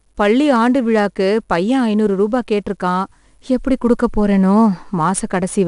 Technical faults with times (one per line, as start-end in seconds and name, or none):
0.00-5.68 4-bit ADPCM compression